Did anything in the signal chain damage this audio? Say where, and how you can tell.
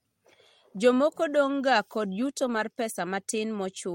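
Yes. Lost packets were rebuilt from error correction at the network and codec stage. The speech turns briefly rough and noisy at 1.45 s, then again in about 140 ms of rebuilt audio between 2.37 and 2.63 s. There are no gaps, because the decoder played low-bitrate copies carried in the following packets.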